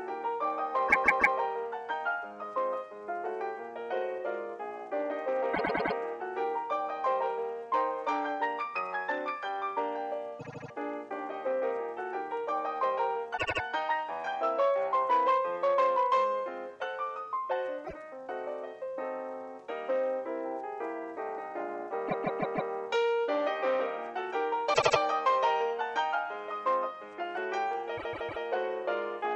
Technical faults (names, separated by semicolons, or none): repeated frames